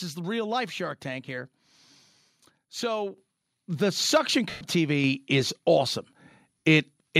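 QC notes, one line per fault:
3.18 s and 5.04 s: microphone volume stepped up. Speech and background jump louder together, by about 8 dB and then about 3 dB. The input gain was raised in one step, not faded in, so each rise lands abruptly.
4.50–4.61 s and 6.59–6.65 s: lost LE Audio frames. Gaps of 110 ms and 60 ms, which fits runs of 10 ms frames. The LC3 decoder repeats the last spectrum with scrambled signs, so voiced sound smears into noise, fading away across the longer gap.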